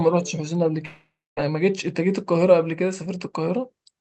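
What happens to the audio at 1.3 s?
At 1.3 s the audio is in the silent tail of a long dropout running from 0.85 to 1.39 s, likely a network dropout. The receiver stretches the last sound into a fading buzz, then leaves near-silence for about 0.26 s before audio resumes with roughly half a second lost.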